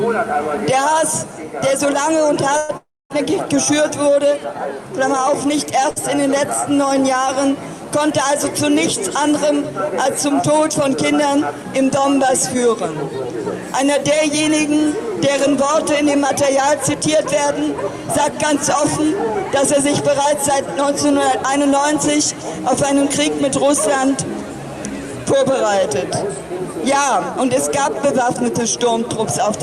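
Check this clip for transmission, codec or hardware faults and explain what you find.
Three kinds of network-timing fault appear, all of the kind a call receiver produces when packets arrive unevenly, and none pointing to codec or hardware trouble.

Call audio freeze, 2.57 to 2.71 s and again 2.77 to 3.12 s. The sound hangs as a fading buzz for about 115 ms, resumes briefly, then hangs again for about 330 ms, of which the last 250 ms drops to silence. The likely cause is packets held up in transit so the jitter buffer emptied and the receiver extended the last sound until data came back. Nothing is lost; a gap is inserted. What sets it apart from a short stall is its length and the decay to silence.

Short stall from a late packet, 5.9 to 5.98 s. One sound is held about 60 ms too long, then the audio picks up exactly where it left off. A single packet missed its slot, so the receiver stretched what it had. 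Unlike the freeze it never fades to silence, and unlike a dropout nothing is skipped, so the timing shifts but the content stays whole.

Jitter buffer speed-up, 10.88 to 11.78 s at 105%, 15.61 to 16.66 s at 103%, 17.07 to 21.9 s at 104%, and 27.55 to 28.92 s at 104%. The buffer held more than its target, so the receiver trimmed tiny pitch-period slices repeatedly, removing about 50 ms, 40 ms, a fifth of a second and 70 ms respectively. The sound runs faster while pitch stays put, hurried-sounding in the 105% stretch, which distinguishes it from a sample-rate error that would raise pitch too.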